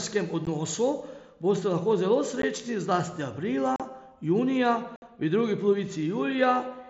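Short, hard-edged holes break the speech at 0.45 s and 2.42 s, then from 3.76 to 3.80 s and 4.96 to 5.02 s. This is unconcealed Bluetooth headset packet loss: voice packets between headset and phone went missing and silence or an idle pattern replaced them, fitting roughly two, two, five and eight lost frames. The mSBC wideband link itself is audible as light graininess.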